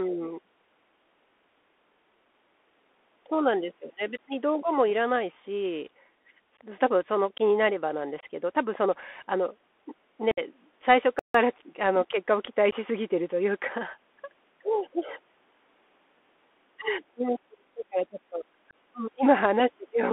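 Thin, boxy speech with a scratchy edge runs through all 20 seconds: nothing reaches above about 3.5 kHz or below about 250 Hz, s sounds come out gritty, loud bright syllables crunch, and a fine granular hiss sits under everything. That is the Bluetooth CVSD headset codec, which encodes the audio as a single up-or-down bit per sample at 64 kbps with an adapting step size that cannot keep up with fast, loud high-frequency movement.

At 6.57 s the speech briefly drops out with an abrupt edge, and similar holes follow at 8.21 to 8.24 s, at 10.31 to 10.40 s, at 12.71 s and at 18.71 s. Each is a hard-edged gap of silence, most 15 ms long, the one at 8.2 s 22.5 ms, and the one near 10.3 s a more obvious 60 ms chop. These are unconcealed Bluetooth headset packet loss. Voice packets between headset and phone went missing and nothing filled them in, which fits a couple of packets for the short gaps and about seven for the longest.

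From 11.19 to 11.34 s the sound stops mid-flow for about 153 ms and then picks up again. That gap is a playback stall, likely caused by the player running short of data or its audio thread being blocked, so the output fell silent until it recovered.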